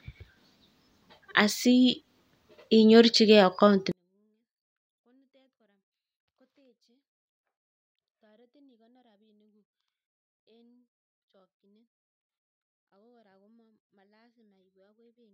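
At 3.92 s the speech suddenly falls by about 48 dB and stays nearly inaudible to the end, though still clean. This is a 24-bit alignment error (too quiet): 24-bit samples sitting in the low bytes of 32-bit words are being read as full 32-bit integers.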